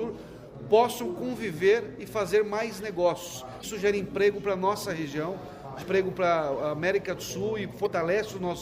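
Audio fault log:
3.59–3.64 s, 5.79–5.83 s and 7.83–7.87 s: damaged data in a compressed stream. Each event is a short chirp, squawk, click or hole lasting about 45 ms, where the decoder hits corrupted bytes in the bitstream, misreads or discards the affected frames, and loses sync until it finds the next valid frame header. The repeated, similar-length bursts point to a short stretch of garbled data each time, not a continuous fault in the signal path.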